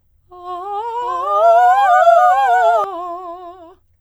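A short music clip with a doubled audio track from 1.02 to 2.84 s: a full-band copy at about equal level trails by roughly 0.7 s, likely a slower second capture path. The waveform shows an abrupt onset and cutoff of the copy, and the spectrogram shows duplicated patterns offset in time with no decay tail.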